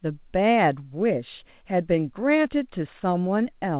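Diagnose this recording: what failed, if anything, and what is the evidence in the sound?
Nothing failed here: the speech comes through the call path with the narrow, telephone-like top end you'd expect from G.711 mu-law at 64 kbps, nothing above about 4 kHz, and no dropouts, glitches or damage anywhere in the recording.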